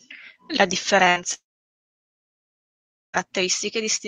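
At 1.09 to 1.19 s, a burst of packet loss drops about 60 ms of speech; the receiver holds the last sound and fades it briefly, then skips ahead. From 1.34 to 3.16 s, a likely long network dropout loses about 1.8 s: a short fading tail, then about 1.7 s of silence before speech resumes further on.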